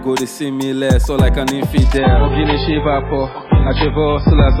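An adaptive stream drops to a lower bitrate at 1.97 s and stays there to the end of the clip. The switch is abrupt but gapless: the player swapped to a leaner rendition mid-stream, with no pause. From that point the audio loses everything above 5.2 kHz and takes on a duller, more artefact-laden quality, which points to a step down from roughly 128 kbit/s MP3 to a very low 16 kbit/s encoding.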